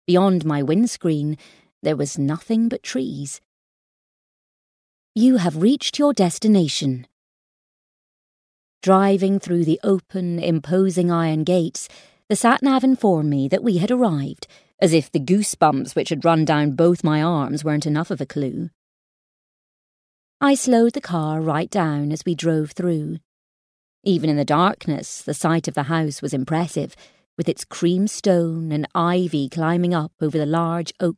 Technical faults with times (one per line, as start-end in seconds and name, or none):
none